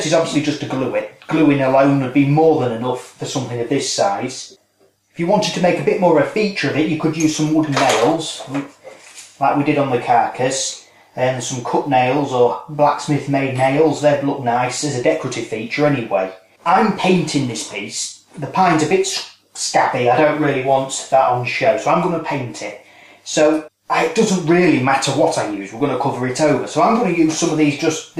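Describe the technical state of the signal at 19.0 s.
At 19.0 s the signal is intact, with no fault audible at that moment.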